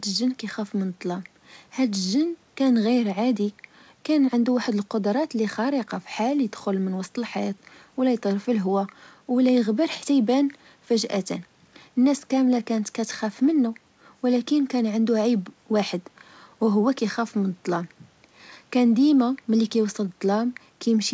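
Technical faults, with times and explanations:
No technical faults turn up here; the speech comes through an ordinary call path, and the lack of anything above 8 kHz is simply that line's normal band limit, which fits a G.722 codec.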